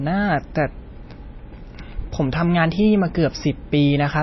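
Speech with plainly audible damage throughout, most likely from MP3 compression at a low bitrate, around 24 kbps. The sound is watery and swirly, and nothing remains above 5.8 kHz. A spectrogram would show a flat ceiling there with flickering gaps beneath it.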